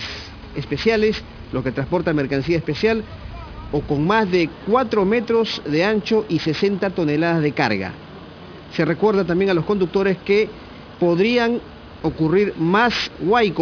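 Aliasing runs throughout the clip. The audio was resampled down without an adequate anti-aliasing filter, consistent with a drop to around 11 kHz, so content above the 5.5 kHz fold point mirrors back as unrelated tones, about 20 dB below the signal, giving high frequencies a gritty, metallic edge.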